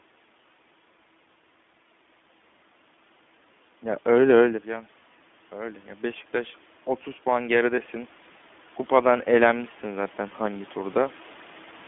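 Throughout, the speech sounds thin, slightly rough and synthetic, with nothing above about 3.5 kHz and little below 200 Hz. This is the iLBC codec, which codes each 20 ms frame independently. The plainly audible damage fits its 15.2 kbps mode.

From 7.23 to 7.96 s, the voice and the room noise swell together by about 3 dB. This is automatic gain rising: the input had dropped by about 13 dB, and the gain control slowly raised its level to compensate.

Inside that swell, from 7.76 to 7.79 s, a brief held, faintly buzzy vowel-like sound replaces the speech, then the speech returns at once. These are lost iLBC frames. One 20 ms frame went missing, and the decoder filled it by repeating the last pitch cycle mixed with noise.

From 9.02 to 11.23 s, a slower swell of about 4 dB lifts voice and background together. This is the gain control rising again. Within it, at 9.48 to 9.51 s, another single 20 ms lost frame gives the same short buzzy hold before the speech recovers at once.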